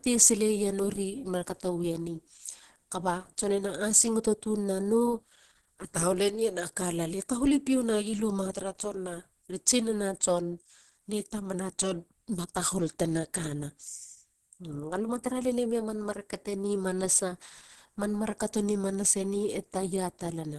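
Throughout the speech, the sound is muffled and hoarse, with a grainy roughness in the upper range, and nothing at all above 12.1 kHz. This is likely Opus compression at a low bitrate, which fits roughly 16 kbps in its hybrid speech mode: the encoder narrows the bandwidth and codes the top bands coarsely, filling them with noise instead of detail. A spectrogram shows a flat ceiling at 12.1 kHz, with smeared, speckled texture just below it.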